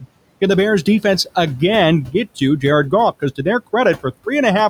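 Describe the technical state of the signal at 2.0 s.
At 2.0 s, noise suppressor artifacts are present, as throughout the clip. The suppressor pulls the room noise down by about 21 dB between words, letting it rise again under speech.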